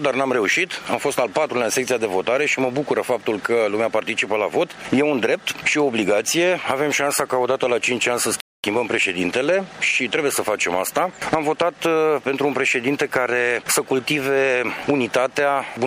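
There's a playback stall at 8.40 s, where the sound drops out for about 240 ms, likely because the player ran short of data or its thread got blocked.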